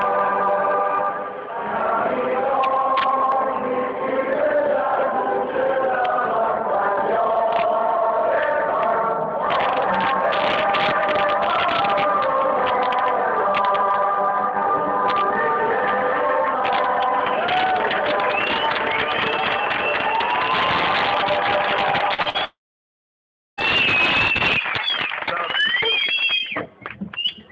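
At 22.14 to 22.20 s and again at 22.22 to 22.27 s there are two short concealed packet losses. In each, about 40 ms of audio never arrived in time. The receiver covered the hole by extending the last sound, for about 43 ms and then 32 ms. It then merged back into the real signal. Each one is heard as a quick smear or wobble. Whatever fell in those gaps is gone.

From 22.29 to 22.36 s comes a burst of packet loss. Another 40 ms or so went missing. This time the concealment ran for about 50 ms and was turned down as it went. The last sound hangs on briefly as a fading buzz or hiss. The audio then picks up again further along, with the piece in between absent.

The worst event starts at 22.44 s and lasts until 23.59 s. It sounds like a long network dropout. About 1.14 s of audio is missing. The receiver extends the last sound briefly, and it fades out fast. Then there is about a second of near silence before the sound returns. 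The likely cause is a stall in the network delivering nothing for over a second. Throughout, nothing is heard above 8 kHz, which fits a wideband call codec such as G.722.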